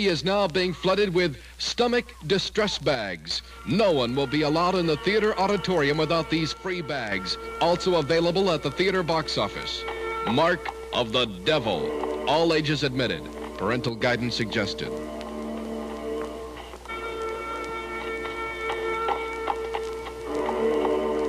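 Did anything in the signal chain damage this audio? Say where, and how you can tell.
Yes. The audio shows one channel dropping out three times: 2.95 to 3.31 s, 6.54 to 7.12 s, and 13.89 to 14.01 s, lasting about 0.36, 0.58 and 0.12 s. In each gap the level falls abruptly by about 6 dB and recovers just as sharply. That matches a mono sum losing half its input. The likely stage is analogue wiring, such as an intermittent cable or connector on one leg of the stereo pair.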